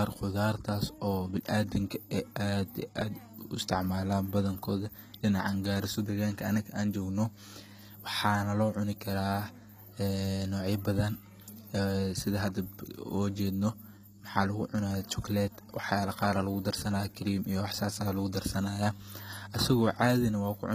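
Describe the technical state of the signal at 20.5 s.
HE-AAC compression affects the speech at 20.5 s, as it does throughout the clip. The treble is likely rebuilt by spectral band replication from copied lower bands, leaving plainly audible gritty, lispy s sounds, nothing above 14.9 kHz, and a sound that fits about 20 kbps.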